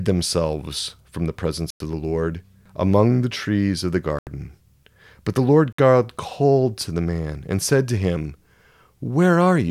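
Speech drops to silence three times: at 1.70 to 1.80 s, 4.19 to 4.27 s, and 5.72 to 5.79 s, for roughly 100, 80 and 60 ms. Each gap is a likely Bluetooth stall, where delayed packets let the headphone buffer run empty before playback resumed.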